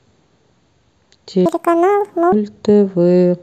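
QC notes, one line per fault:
1.46–2.32 s: section at the wrong speed. This stretch of speech plays back at 1.85 times its recorded rate, so it turns abruptly hurried and high, with pitch lifted by around ten semitones. Speed and pitch rise together and drop back together at the section boundaries, with no pitch correction. The likely cause is a segment rendered against the wrong clock during editing or playback.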